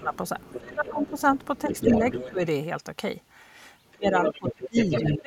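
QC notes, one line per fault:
0.00–0.13 s, 0.57–1.18 s, 1.66–2.42 s, 3.95–5.27 s: speech suppressed in double talk. The talker's level sags while the far side is also active, by around 10 to 25 dB, deepest in the final stretch. The likely cause is an echo canceller that cannot separate the near talker from loudspeaker echo and turns both down.
0.14–2.31 s, 3.89–5.15 s: other side's voice leaking through. A second voice sits only slightly below the talker, which is loud enough to compete rather than hang in the background. This is likely residual loudspeaker echo picked up by the microphone that the echo canceller failed to remove.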